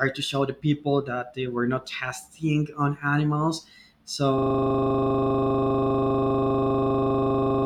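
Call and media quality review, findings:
System hang loop from 4.38 s to end: 40 ms segment repeating about 80 times, 25 Hz buzz; host/driver frozen, output buffer cycling. Spectrogram shows identical stripes every 40 ms.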